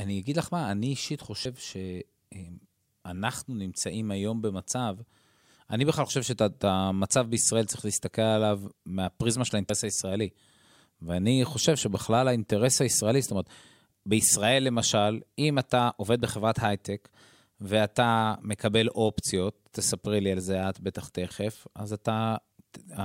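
Compressed frames skipped in this speech clip at 1.44 s, 6.09 s and 9.69 s: whole 23.2 ms codec frames go missing, jumping ahead about a fifth of a second at the first point and about a tenth at the others.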